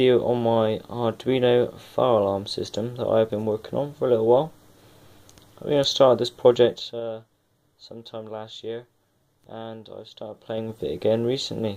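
From 10.28 to 10.84 s, zipper noise: a level change of roughly 15 dB is applied in unsmoothed 3 dB steps, about ten per second, each producing an audible tick.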